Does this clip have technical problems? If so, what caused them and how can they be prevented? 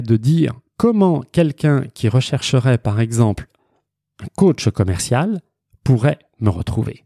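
No, nothing stood out as a technical problem on listening, so there is no cause to trace and nothing that needs preventing.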